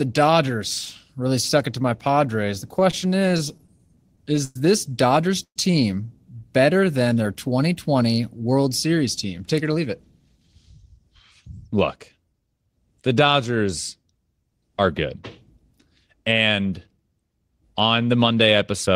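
From 2.71 to 4.57 s the speech shows repeated stalls (stutter). Packets kept arriving late, so the jitter buffer emptied eighteen times and the receiver stretched the last sound across each gap, about 271 ms in all, the longest 106 ms. Nothing is lost, but the passage drags and stutters.

At 5.43 to 5.58 s a call audio freeze interrupts the speech: about 125 ms is held over by continuing the previous sound, which fades into roughly 80 ms of silence before the audio resumes where it stopped. The likely cause is packets held up in transit, leaving the jitter buffer empty and adding 125 ms of delay.

A jitter buffer slow-down runs from 6.66 to 7.24 s. The receiver repeated single pitch periods to rebuild its reserve, adding 76 ms, so the speech plays at 88% speed with unchanged pitch and drawn-out sounds.

Two jitter buffer speed-ups follow, 9.25 to 11.12 s at 108% and 11.69 to 12.56 s at 111%. 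Here the receiver trimmed short pitch-period pieces to reduce excess buffered delay, removing around 150 ms and 100 ms, so the speech sounds hurried at the same pitch.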